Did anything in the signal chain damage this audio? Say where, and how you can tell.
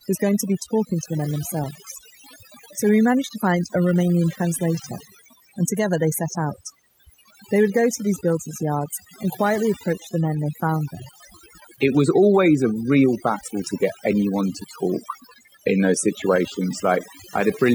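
Yes. The damage comes from a processing stage, overdone noise removal: a noise reduction step set far too aggressively. Throughout the speech, any frequency band that sits close to its noise estimate is pulled down hard or switched off. Background noise gives way to near silence dotted with twinkling, chirpy specks, and quieter parts of the voice are cut away with the noise.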